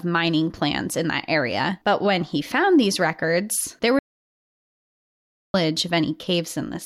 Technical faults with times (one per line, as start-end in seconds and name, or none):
3.99-5.54 audio dropout to silence